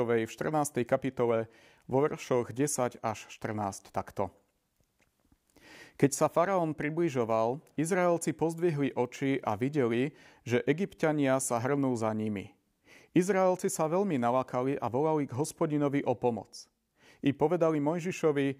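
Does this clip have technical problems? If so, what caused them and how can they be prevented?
No, nothing in this speech recording stood out as a technical problem on listening, so there is nothing here to trace to a cause or to prevent.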